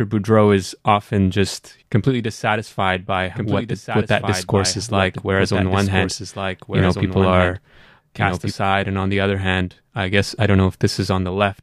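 A doubled audio track runs from 3.36 s, after "just completely dissatisfied by", to 8.52 s, before "and on the other". A slower second capture path or misaligned edit likely mixed the speech in twice, so a dry copy about 5 dB quieter trails about a second and a half behind, starting and stopping abruptly.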